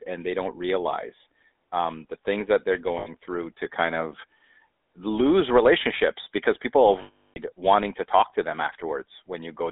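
Throughout, the speech has a buzzy, gravelly roughness, with a thin band that stops short near 3.7 kHz and drops the lows below 300 Hz. This is plainly audible GSM full-rate codec damage, and its character points to the 13 kbps GSM coder. It models the vocal tract and excites it with a sparse, evenly spaced pulse train, discarding most of the fine detail of the excitation. That leaves the grain that runs through every stretch of voice.

At 2.98 s the sound briefly freezes into a rough, metallic ring until about 3.08 s, an 80 ms gap that fits four lost 20 ms GSM frames. A longer hold starts at 7.02 s and lasts 340 ms, to about 7.38 s. There the ring is cut to silence near its end before the speech resumes. In both places the decoder substituted the last good frame's settings.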